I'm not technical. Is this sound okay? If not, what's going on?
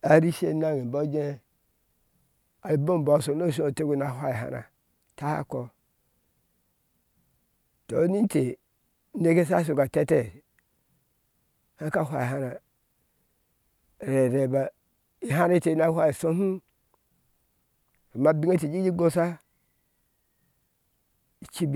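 Yes, no technical faults are audible anywhere in this speech recording.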